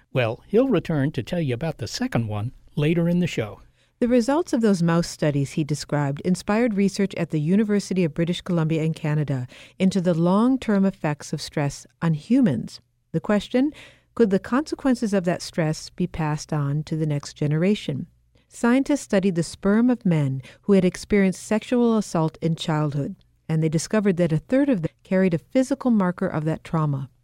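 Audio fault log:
24.85–24.87 s, damaged data in a compressed stream: a brief blip lasting about 24 ms, falling between "that a third of" and "carried a". A stretch of the encoded bitstream here holds wrong bytes, so the decoder misreads or rejects the affected frame, loses frame sync and scans forward for the next valid header. The disruption during that resync is the short, unnatural break that cuts into the speech.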